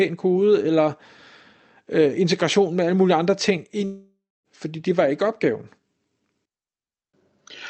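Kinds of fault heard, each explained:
Long network dropout: the stream most likely stopped delivering audio for about 0.6 s, leaving the receiver nothing to play, so it filled the gap by extending the last sound it had. Right after "alle mulige andre ting", from 3.85 s to 4.47 s, the speech smears into a buzzy tail that fades away, sinks into about a quarter second of near-silence, then resumes with that stretch of speech simply gone.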